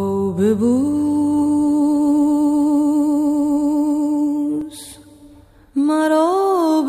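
At 4.61 s there's a tiny block of digital silence, just under 2 ms long, where the sound drops out and comes back with no fade. At that length it reads as a sharp tick, and it fits a buffer not being filled in time.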